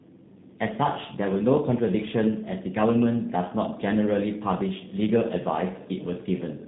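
From start to finish, the speech suffers tandem speech coding. It passed through CVSD, then G.711 A-law, then G.729A at 8 kbit/s. Each coder reworked the previous one's damage. The result sounds rough, muffled and warbly, with nothing above 3.8 kHz.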